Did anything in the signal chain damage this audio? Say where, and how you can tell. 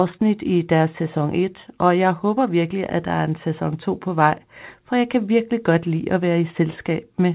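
No, the speech comes through the call path intact, with nothing above 4 kHz and the narrowband character of a 64 kbps G.711 mu-law connection, and no stage in the chain leaves any damage to point to.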